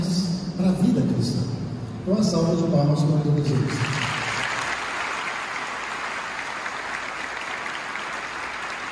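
Nothing stood out as a technical problem on listening to this clip.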